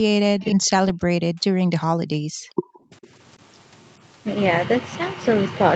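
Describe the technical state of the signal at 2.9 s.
At 2.91 to 2.95 s the echo canceller likely met double talk, with the far side active at the same moment, and could not tell the local talker apart from loudspeaker echo, so it pulled the signal down. The result is speech suppressed in double talk: a brief, shallow dip of about 5 dB lasting roughly 40 ms, heard as a momentary dip in the voice's level within audio that already tops out near 8 kHz.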